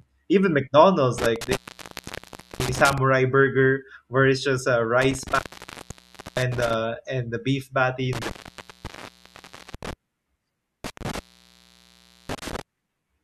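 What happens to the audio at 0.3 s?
Nothing goes wrong at 0.3 s; the audio runs through that moment intact, with no dropout, click or distortion.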